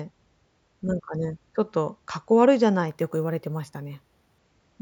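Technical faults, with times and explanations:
2.88 to 4.38 s, imaging from sample-and-hold upsampling: each sample just gets repeated with no smoothing, which fits 16 kHz audio pushed to 48 kHz, so a mirrored copy sits in the 8 to 16 kHz band about 26 dB down, a metallic fizz that tracks the speech's loudness.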